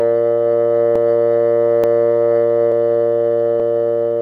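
Two devices with independent clocks, roughly 400 ppm apart, are likely slipping a small block of about 15 samples between them. In this music clip that gives regular clock drift buffer slips: clicks every 0.88 s from 0.96 to 3.60 s.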